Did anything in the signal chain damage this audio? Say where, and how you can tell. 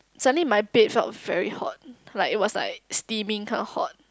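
No, nothing in the chain audibly damaged this speech.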